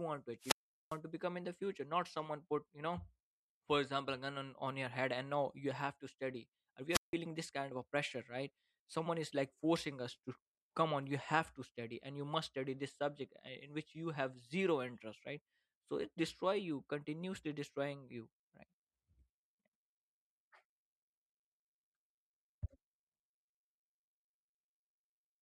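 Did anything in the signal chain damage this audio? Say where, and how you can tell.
Yes. The damage happens at the radio link ahead of the analogue input, as a wireless microphone squelch dropout. It occurs twice. From 0.40 to 0.99 s, hiss swells, then the speech cuts to near silence for about 400 ms. From 6.90 to 7.15 s, the same pattern repeats, with a 166 ms mute. The FM signal faded too far. The receiver's squelch then shut the output until the carrier recovered.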